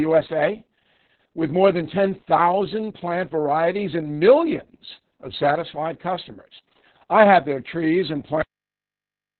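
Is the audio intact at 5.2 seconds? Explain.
No: Opus voice compression, running throughout the clip, codes speech narrowband with SILK at what sounds like about 6 kbps, so at 5.2 s everything above 4.3 kHz is gone and the speech sounds muffled, hoarse and robotic.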